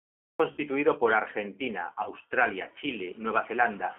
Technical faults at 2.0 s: G.729 codec; VoIP packet loss concealed by the speech codec

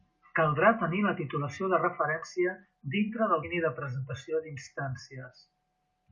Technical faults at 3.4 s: damaged data in a compressed stream

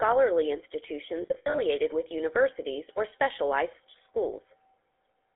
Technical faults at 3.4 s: GSM full-rate codec

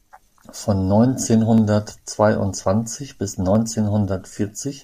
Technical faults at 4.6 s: none

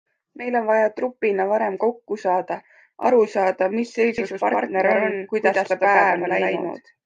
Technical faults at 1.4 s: none

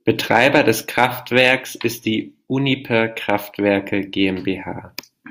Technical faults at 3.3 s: hard clipping

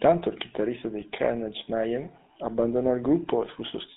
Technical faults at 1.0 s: GSM full-rate codec; lost GSM frames

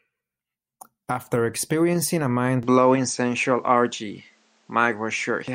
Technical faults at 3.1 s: input switched to a poorer device

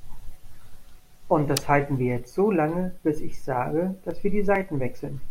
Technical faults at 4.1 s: block of digital silence

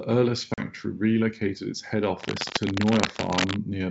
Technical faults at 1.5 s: none

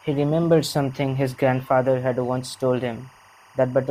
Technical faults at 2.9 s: timecode bleed

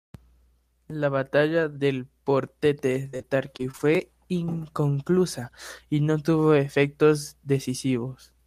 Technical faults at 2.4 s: none

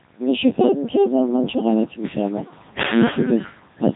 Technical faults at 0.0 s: Codec 2 vocoder

